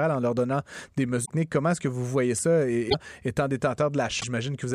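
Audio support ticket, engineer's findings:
Short garbled breaks in the speech, audio skipping ahead at each: 1.24–1.30 s, 2.89–2.94 s, 4.19–4.24 s. Each lasts about two 26.1 ms frames. Likely cause: broken MP3 bit reservoir after frames were dropped. Following frames reached back for borrowed data and decoded bytes from the wrong frame until the reservoir refilled.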